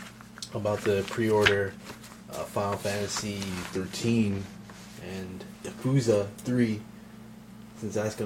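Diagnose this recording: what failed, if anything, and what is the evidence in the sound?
A drift correction step runs from 3.50 s to 4.93 s: the sound slows by about 6.3% and drops about 113 cents, just over a semitone, then snaps back to the original pitch and speed at the end. Because speed and pitch move together and recover abruptly, the stage is likely the driver or buffer layer, where clock-matching software briefly resampled playback to refill an underfed buffer before returning to the nominal rate.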